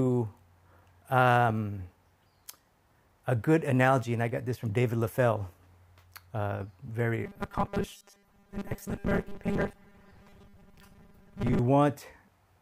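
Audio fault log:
7.25 to 11.59 s, robotic sound from repeated short buffers: the audio hardens into a rigid metallic buzz locked at 200 Hz while still loosely tracing the underlying sound. A 200 Hz tone implies a 5 ms chunk being replayed, most likely because fresh audio arrived too seldom and the last fragment looped to fill the gap, with roughly two-thirds or more of the real material skipped. Unlike a stutter or dropout, there are no audible gaps or jumps, as the skipped time is filled by the repeating buzz.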